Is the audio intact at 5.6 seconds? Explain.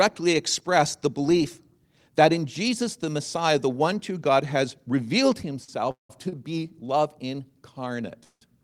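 No. After "has revealed", a late packet emptied the jitter buffer, causing a short stall from 5.64 to 5.81 s: about 36 ms of sound is stretched and held with a slight buzz or dip, though nothing is lost.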